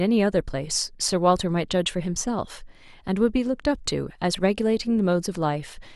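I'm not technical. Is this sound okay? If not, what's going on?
Yes, I can't hear anything wrong with it.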